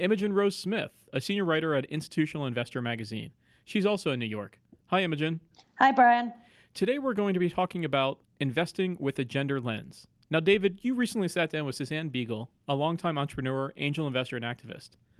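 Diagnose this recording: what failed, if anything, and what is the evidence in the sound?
Nothing in the capture, conversion, processing, transmission or playback chain audibly failed; the speech carries no dropout, distortion, clipping or timing defect.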